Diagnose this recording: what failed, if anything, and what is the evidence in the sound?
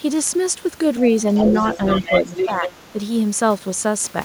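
Call processing: the other side's voice leaking through at 1.35–2.19 s and 2.37–2.89 s, only a few dB below the talker. A distinct second voice, not room reverb, so likely uncancelled loudspeaker echo.

Speech suppressed in double talk, 2.02–2.98 s: the talker drops by up to around 10 dB for about half a second while that echo overlaps. The dips likely follow the other voice, unlike random network dropouts.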